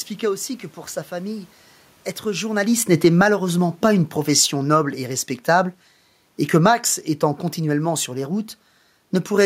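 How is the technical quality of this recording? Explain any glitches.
The recording has two automatic gain control faults that overlap, both falling close to the talker's move at around 2.5 s.

From 2.25 to 5.73 s the automatic gain falls by about 8 dB. The control judged either the input too loud or its background noise too strong, and pulled its gain down. The voice and the room noise sink together, so the waveform envelope and the spectrogram's noise floor both darken gradually.

From 3.28 to 3.67 s the automatic gain rises by about 4 dB. The control judged the input too quiet and raised its gain. Voice and background swell together over that short stretch, which shows as a brief widening of the waveform and a lifted noise floor across the spectrogram.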